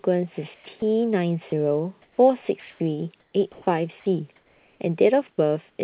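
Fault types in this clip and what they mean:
comfort noise in place of the background: The sender likely stopped transmitting during pauses, and the receiver filled the gaps with synthetic noise. From 0.54 to 0.82 s and again from 5.70 to 5.78 s, the real background turns flat and featureless, dropping about 18 dB in the second gap.
sound dropped by the voice detector: The voice detector likely mistook part of the speech for background and briefly stopped sending. At about 0.80 s a 20 ms piece of sound is lost, replaced by steady noise until transmission resumes.
sound chopped by the voice detector: The detector likely toggled repeatedly between sending and not sending from 1.5 to 4.8 s. Over a second of sound is swapped for comfort noise, so the speech sounds choppy.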